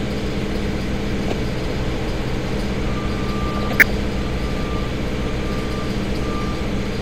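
DAB burbling appears from 1.24 to 1.33 s and again from 3.52 to 3.91 s. Weak reception let bit errors slip past error correction into the MP2 data. Corrupted samples then put short blips of noise in single sub-bands. It comes through as short noise blips over the sound. The second burst lasts longer and fits a run of around twenty frames. They point to roughly 0.5 and 0.4 percent of bits in error.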